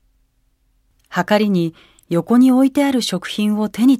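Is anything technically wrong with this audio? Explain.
No, nothing technically wrong can be heard here.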